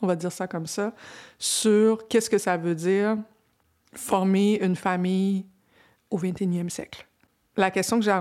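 No technical faults can be heard anywhere in the speech. There is no moment in the recording where anything goes wrong.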